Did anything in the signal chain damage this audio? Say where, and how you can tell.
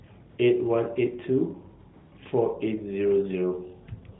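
Yes, at the call-processing and codec stage: AMR comfort noise replaces the real background twice, from 0.30 to 0.38 s (80 ms) and from 1.94 to 2.12 s (180 ms). The phone's voice activity detector judged the talker silent and stopped sending speech frames, so the receiver synthesised smooth noise from a coarse level-and-spectrum description. On a spectrogram these gaps show as flat, featureless bands below the 4 kHz narrowband ceiling, with abrupt edges where the real background resumes.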